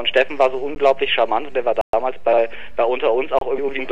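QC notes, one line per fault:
0.75 s, 1.81–1.93 s, 3.39–3.41 s: block of digital silence. The output drops straight to silence and returns with no fade. The 13 ms gap at 0.75 s is a tick, the 120 ms one a clear hole, and there is a 27 ms one as well. This points to buffers not filled in time.
2.27–2.38 s, 3.58–3.80 s: frames out of order. Two adjacent runs of frames were decoded swapped, about 52 ms halves in the first stretch and about 105 ms halves in the second. This gives a garbled flutter. No time is lost.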